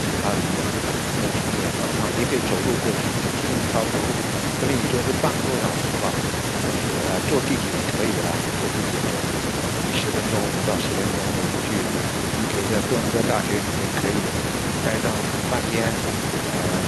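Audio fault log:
throughout: echo with no canceller. Every phrase of the speech is trailed roughly a third of a second later by a faint, thin copy about 25 dB down, because the far end's loudspeaker feeds its microphone and nothing subtracts that return before it travels back.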